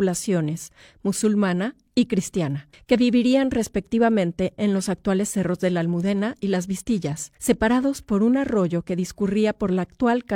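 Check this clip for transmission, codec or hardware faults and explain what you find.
No transmission, codec or hardware faults are audible anywhere in the recording.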